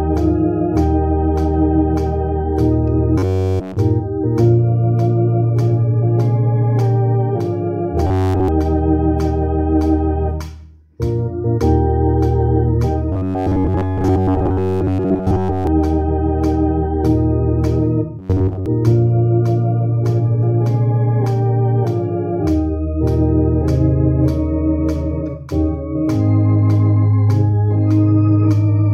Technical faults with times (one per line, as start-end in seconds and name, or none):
3.18-3.78 robotic sound from repeated short buffers
8.07-8.48 robotic sound from repeated short buffers
13.12-15.67 robotic sound from repeated short buffers
18.19-18.66 robotic sound from repeated short buffers